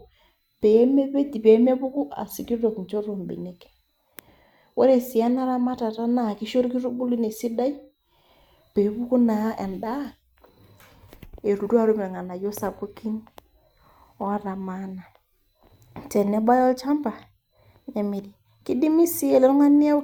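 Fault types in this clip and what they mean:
No fault types can be heard in this clip.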